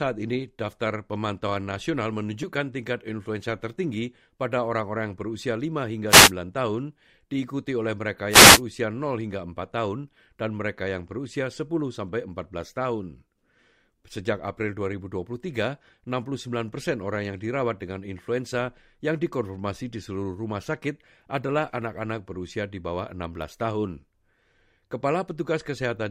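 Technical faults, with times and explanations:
6.08–6.32 s and 8.29–8.62 s: wireless microphone noise hits, two short bursts of static about 0.24 s and 0.33 s long that bracket "tahun diikuti oleh mereka". Each is a brief fade in the analogue FM radio link, where reflected copies of the signal arrive out of phase and partly cancel. As the received level drops, receiver noise rises, giving the swishing texture of each hit.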